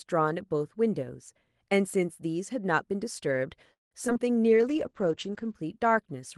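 At 3.73 s the speech stops for about 0.2 s: a brief continuation of the last sound fades into roughly 150 ms of silence, and then the speech resumes with nothing skipped. This is a call audio freeze, likely caused by delayed packets draining the jitter buffer. Unlike packet loss, it inserts a gap rather than removing audio.

Short concealed packet loss follows at 4.07 to 4.10 s and 4.14 to 4.17 s. Each is a quick smear or wobble where 40 ms and then 20 ms of audio went missing and were replaced by only 8 and 12 ms of extrapolated sound. The first loss also pulls the timing roughly 30 ms earlier.

From 4.44 to 4.76 s a jitter buffer slow-down stretches the speech to 90% speed by repeating pitch periods, adding 37 ms. The sound is drawn out, but the pitch does not drop.

Overlapping this, a call bitrate drop runs from 4.49 to 5.61 s. The speech turns rough and muffled, with the top end falling from 12 kHz to 8 kHz for about one second. 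This fits the Opus encoder stepping down from 32 to 10 kbps. The effect is sustained dulling, not momentary glitches.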